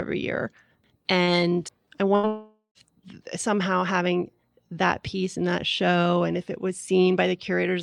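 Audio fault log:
1.23–1.30 s, short concealed packet loss: About 40 ms of audio never arrived in time. The receiver bridged the hole by extending the preceding sound, then blended back into real audio. The result is a brief smear where a tiny piece is missing.
2.15–2.26 s, burst of packet loss: Roughly 80 ms was lost in one run. The receiver kept the last sound going and lowered it as the gap lengthened. It is heard as a short held, fading sound before the sound jumps ahead.
2.27–2.78 s, long network dropout: The sound freezes into a fading continuation for nearly half a second, then goes silent for about 110 ms. It resumes at "somehow having that piece", with about 0.48 s gone. A network dropout is the likely cause.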